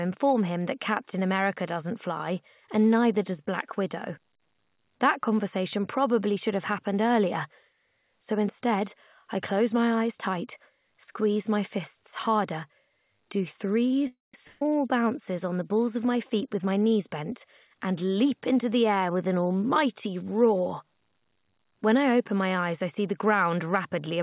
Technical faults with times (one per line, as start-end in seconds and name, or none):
14.07-14.34 call audio freeze
14.47-14.70 burst of packet loss
16.15-19.05 jitter buffer speed-up
23.58-23.88 jitter buffer speed-up